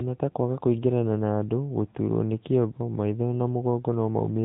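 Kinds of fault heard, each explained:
AMR narrowband mobile codec: throughout, the speech passes through the 2G/3G mobile coder, which rebuilds the voice from a vocal-tract model driven by sparse pulses. Nothing above 3.8 kHz survives, and the plainly audible buzzy, synthetic edge fits a bitrate near 10 kbps.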